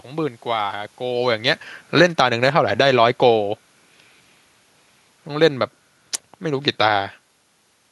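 From 1.07 to 3.56 s, automatic gain falling lowers the level by about 4 dB. The room noise sinks along with the speech, which a talker moving wouldn't cause.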